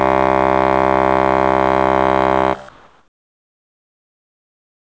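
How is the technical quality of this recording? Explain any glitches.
The recording has passed through a call codec that leaves nothing above 8 kHz, and from 2.69 s to the end it has one glitch: comfort noise in place of the background. For the last 2.26 s the real ambience gives way to a flat, featureless hiss about 5 dB quieter. The likely cause is discontinuous transmission: the sender stopped sending, and the receiver synthesised noise roughly matched to the background. Unlike a gate or dropout, the gap is not silent. A smooth, lifeless noise floor remains.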